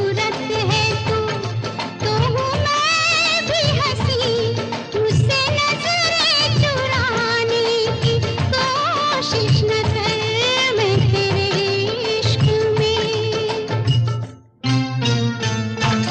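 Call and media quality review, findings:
No call or media quality findings to report.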